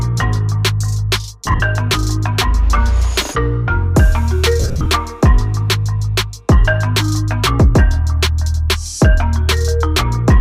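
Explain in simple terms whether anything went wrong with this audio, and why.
Twice the sound breaks into a brief hissy smear, at 1.46 to 1.60 s and 4.60 to 4.86 s. These are lost LE Audio frames: wireless packets went missing, and the decoder filled each short gap with a noisy, fading copy of the preceding sound.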